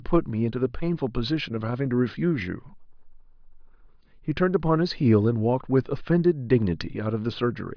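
No technical faults can be heard anywhere in the speech. There is nothing to point to at any moment of the recording.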